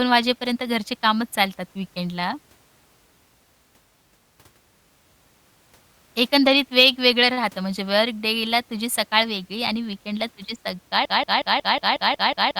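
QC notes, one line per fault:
11.05–12.59 s, broken-record loop: a short fragment of speech, about 0.18 s long, repeats exactly and back to back eight times, giving a stuttering, machine-gun effect that runs to the end of the clip. Whatever speech should have followed is never heard. This likely comes from the player, encoder or stream stalling and resending the last chunk it still held, so the same 0.18 s slice plays over and over instead of new audio.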